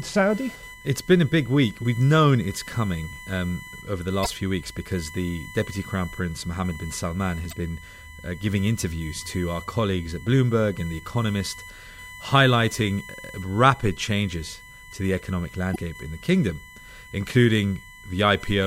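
A steady whine at 1 kHz runs under the speech from start to finish, loudest at 2 kHz and roughly 20 dB below it: USB whine, from bus current leaking into the audio ground. Brief glitches sound at 4.22–4.27 s, 7.49–7.53 s and 15.72–15.76 s, damaged data in a compressed stream: corrupted frames make the decoder lose sync.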